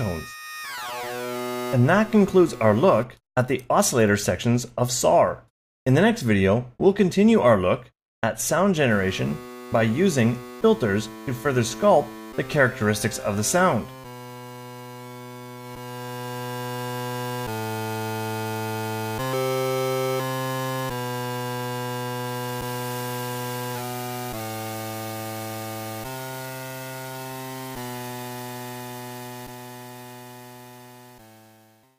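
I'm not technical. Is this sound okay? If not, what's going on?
No. At 23.24 s there's one sharp click. It's likely dropped samples: roughly a single sample went missing, so the sound jumps abruptly.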